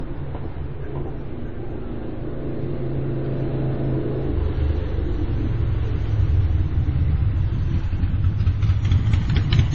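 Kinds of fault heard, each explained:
Transcoding between lossy codecs: The audio was likely encoded at a low bitrate in one lossy format and then re-encoded in another. The second encoder spends its scarce bits on the first encoder's damage and adds its own. Nothing remains above 7.9 kHz, and the sound fits a low-rate MP3 stage followed by a similarly starved Vorbis stage, with both sets of artefacts audible together throughout.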